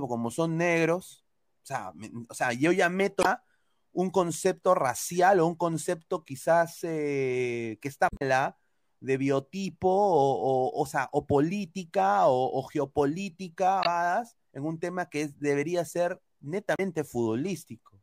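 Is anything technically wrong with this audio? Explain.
Yes. The speech has damaged data in a compressed stream at four points: 3.20 to 3.26 s, 8.07 to 8.22 s, 13.82 to 13.86 s and 16.75 to 16.80 s. Corrupted bytes in the encoded file leave the decoder unable to parse those frames, so it loses sync and hunts for the next valid frame header. Each spot is heard as a brief chirp, squawk, click or short hole, the one near 8.1 s lasting longest at about 150 ms.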